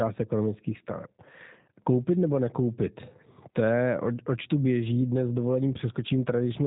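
Speech passes through a G.729 codec here, the low-rate VoIP coder that rebuilds each 10 ms frame from a vocal-tract filter, a pitch predictor and a few coded pulses. The coarseness fits a data rate of about 8 kbit/s. Throughout the clip, nothing above 3.8 kHz survives, so the sound is narrow and telephone-like. The reconstruction damage is plainly audible as a rough, slightly synthetic edge on the voice.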